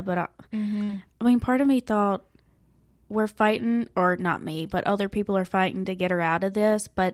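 At about 0.83 to 0.90 s, right before "I mean part of", there's a burst of packet loss. Around 60 ms of speech never arrived, so the receiver stretched the last sound for roughly 50 ms, fading it into a brief buzz or hiss, then jumped ahead.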